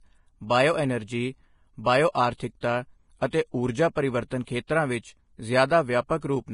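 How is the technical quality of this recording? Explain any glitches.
The quality is poor, with heavy compression damage across the whole speech recording. Vorbis compression, throughout: nothing remains above 10.6 kHz, and coarsely quantised treble turns into hiss and grain, likely from low-bitrate Vorbis encoding near 29 kbps.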